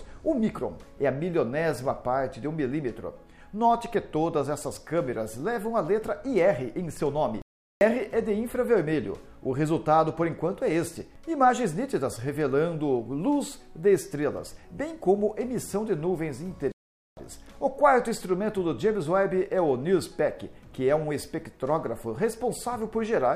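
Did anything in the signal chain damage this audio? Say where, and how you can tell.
Yes. Two playback stalls cut the sound to silence at 7.42–7.81 s and 16.72–17.17 s before it resumes, likely the player running dry of data or blocking.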